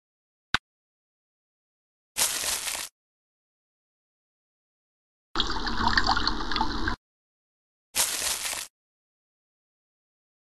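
A corrupt frame decoded gives a quieter glitch at 5.96 s, then a louder one spanning a few frames from 8.44 to 8.51 s. Unlike a dropout or click, misplaced spectral energy sounds like a brief chirp, squeak, blip or burst of noise.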